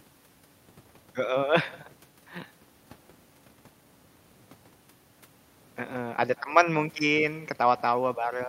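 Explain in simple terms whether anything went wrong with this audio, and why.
Throughout the speech, a faint, thin copy trails every phrase by about a fifth of a second: echo with no canceller, the far loudspeaker leaking back.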